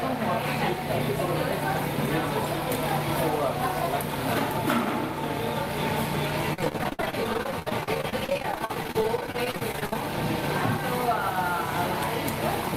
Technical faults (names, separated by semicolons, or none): repeated packet loss (robotic sound)